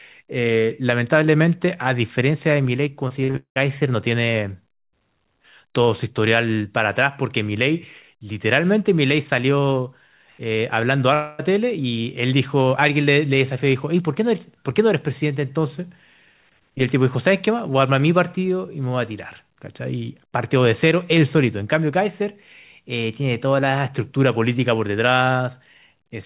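Speech comes through narrowband and muffled, with nothing above 4 kHz, which fits a G.711 A-law call path at 64 kbps. From 3.08 to 3.58 s the speech turns choppy, broken by several short holes, the longest about 0.19 s. This is repeated packet loss (robotic sound): audio kept arriving late or not at all, and each hole was patched by stretching the previous sound. Those patches fill roughly 60 percent of that half-second, which gives it a robotic texture. From 11.14 to 11.41 s the speech gives way to a smeared, fading continuation of the preceding sound that never drops to silence, and then resumes with about a quarter second of material gone. The likely cause is a long network dropout: no audio reached the receiver for that stretch, so it extended the last sound to cover the gap.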